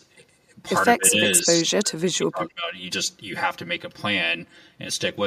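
One channel of this speech recording arrives roughly 5 ms behind the other, and when the two are folded to mono the shared sound cancels at evenly spaced frequencies, beginning somewhere around 100 Hz and repeating upward. This channel delay produces comb filtering for the full length of the clip, giving the speech a hollow, phasey quality with fixed notches carved through its spectrum. Twice the speech level drops sharply, with a dip of around 20 dB across roughly 150 ms between 0.97 and 1.17 s, then a deeper fall of around 25 dB spread over about a second of the stretch from 1.43 to 2.74 s, where the speech sinks. The likely cause is speech suppressed in double talk, with an echo canceller unable to tell this talker apart from loudspeaker echo while the far side was also speaking, and so pulling both down together.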